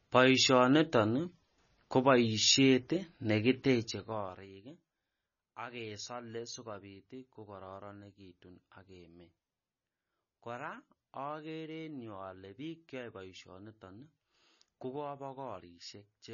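The speech runs through what is likely heavy MP3 compression from start to finish. Starved of bits, the encoder has cut everything above 6.9 kHz and dropped quieter frequency lines that flicker in and out between frames, which points to a very low rate around 24 kbps. The result is dull, watery speech with a swirling, metallic edge on s sounds and softened consonant attacks.

From 3.76 to 4.48 s the level is pulled down by about 20 dB in coarse 2 dB jumps, roughly ten a second, with no smoothing between them, so this is zipper noise. Each jump leaves a small click, and together they form a ticking zip riding over the speech as it fades.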